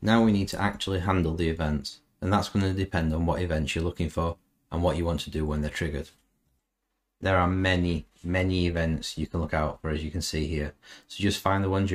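No technical faults can be heard anywhere in the clip.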